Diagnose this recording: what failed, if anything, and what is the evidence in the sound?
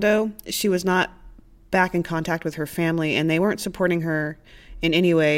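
Nothing failed: the speech shows no audible fault at any stage between capture and playback.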